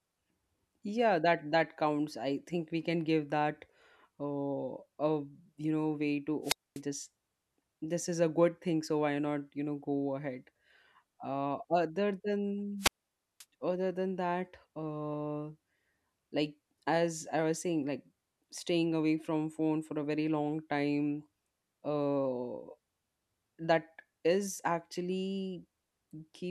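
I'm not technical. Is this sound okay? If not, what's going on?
No. The wireless microphone's radio signal faded twice, and the receiver muted itself each time, a wireless microphone squelch dropout. You hear a burst of hiss, silence, then the voice returns: 6.43 to 6.81 s (0.24 s gap) and 12.78 to 13.45 s (0.53 s gap).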